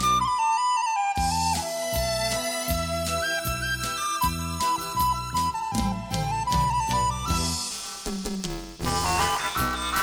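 At 7.71 s, buffer tearing sets in and lasts to the end of the clip. The writing and reading sides of the playback buffer have drifted into each other, so about half of each period replays audio from roughly 10 ms earlier, with a hard splice at both edges. The result is a steady robotic buzz at 188 Hz, which fits a 256-sample buffer. On a spectrogram it shows as a comb of vertical stripes spaced about 5.3 ms apart, with harmonic lines at multiples of 188 Hz. On a waveform it shows as regular step discontinuities.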